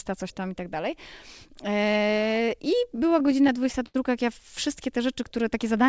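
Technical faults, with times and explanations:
2.92–3.96 s, repeated stalls (stutter): late packets kept emptying the jitter buffer, and gaps of up to 80 ms were filled by extending the last sound, so speech drags before "jak ja wszystkie te".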